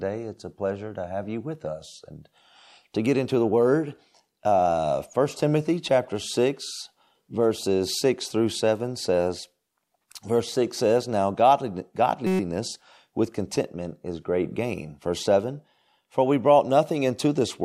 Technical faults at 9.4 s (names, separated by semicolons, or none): none